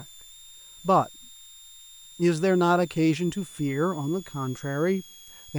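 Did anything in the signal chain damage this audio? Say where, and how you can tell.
Yes. A switching supply whistle runs through the whole clip, and it entered at the analogue stage, through the power feeding the recording chain. A thin high tone sits under the speech. Its pitch wanders between about 3.3 and 3.7 kHz rather than holding steady. It stays roughly 25 dB below the speech. A regulator in audible burst mode shifts its frequency as the load changes, and that drift gives it away.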